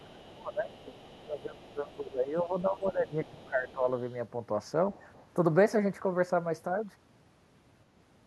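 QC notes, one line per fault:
0.00–2.16 s, 2.39–2.88 s, 3.06–3.74 s, 3.93–4.14 s and 5.13–5.26 s, other side's voice leaking through: a faint second voice sits underneath, roughly 30 to 40 dB below the main speech. It's quietest in the short 3.93 s patch. It comes and goes in scraps rather than one steady stream. Most likely the far end is playing on a loudspeaker and the echo canceller isn't fully removing it from the mic, so that residue gets sent back.
0.00–3.87 s, speech suppressed in double talk: over this stretch the main talker keeps dipping. The deepest drops are around 20 dB, and the affected stretches add up to about three seconds. It lines up with the leaked far-end voice, so both sides were likely talking at once, and the canceller couldn't tell its own talker from the echo. It ducked everything, taking the wanted speech down with it.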